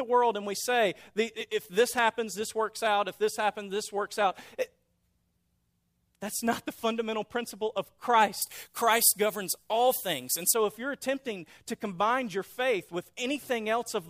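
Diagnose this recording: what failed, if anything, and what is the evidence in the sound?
From 8.42 to 10.54 s, between "the fundamental principle of" and "if you're attempting to", the speech turns thin, bright and hissy, with sibilants pushed forward. This is pre-emphasis left on at the receive or playback stage. The treble lift matches the standard FM 75 µs curve, about 14 dB up at 10 kHz relative to 1 kHz, but the matching de-emphasis cut was never applied, so that section plays back with the boost intact.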